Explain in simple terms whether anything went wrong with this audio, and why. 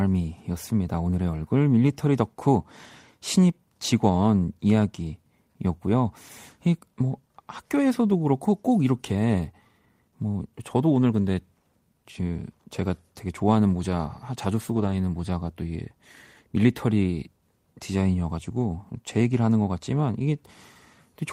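Several packets of this speech were lost in transit around 14.67 to 14.93 s. The fault is a lost packet rebuilt from error correction: each following packet carried a smaller, lower-quality spare copy of the lost one, and the player used those spares to fill in about 140 ms of sound. Nothing drops out, but for that moment the sound turns rougher and noisier than the audio on either side.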